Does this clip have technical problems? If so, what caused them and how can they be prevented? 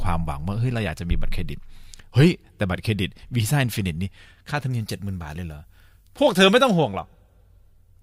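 Yes. From 4.71 to 6.71 s the speech turns thin, bright and sibilant because pre-emphasis was left on. A CD 50/15 µs treble boost, about 8 dB at 10 kHz, was never undone, and a spectrogram shows that stretch's upper band brighter. Always apply matching de-emphasis on playback.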